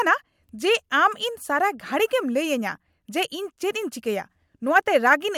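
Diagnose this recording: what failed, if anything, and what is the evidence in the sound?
Nothing stood out on listening to this speech recording that would point to a failure at any stage.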